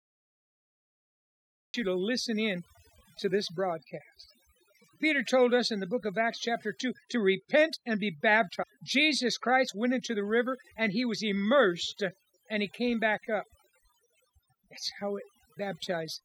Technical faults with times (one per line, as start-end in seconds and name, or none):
0.00-16.24 overdone noise removal
0.00-1.74 cut-off start
8.62-8.64 stream segment skipped